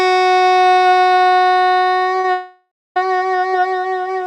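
A short stall from a late packet occurs at 2.20 to 2.25 s. A packet arrived late, the jitter buffer ran dry, and the receiver held the last sound for about 40 ms before resuming where it left off. Nothing is lost, but the sound lingers with a faint buzz or dip and everything after it runs 40 ms later.

A call audio freeze follows from 2.32 to 2.97 s. The last sound is drawn out as a fading buzz or hiss that settles into about 250 ms of silence, and playback then picks up exactly where it stopped. This is likely from packets held up in transit, which let the jitter buffer empty again. It inserts a 638 ms gap without dropping any sound and pushes the remainder later by that amount.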